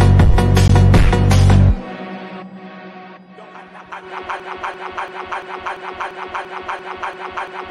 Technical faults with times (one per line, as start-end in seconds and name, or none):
0.68 Bluetooth dropout
4.40-7.70 broken-record loop